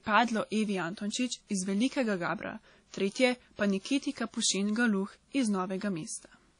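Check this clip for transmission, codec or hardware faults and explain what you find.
One fault runs through the whole clip: WMA compression. The speech sounds washy and ringing, with a hiss that swells and fades along with it, and nothing above 10.1 kHz. The likely cause is a transform codec spreading quantisation noise across long blocks and dropping weak detail, which fits a low bitrate around 32 kbps.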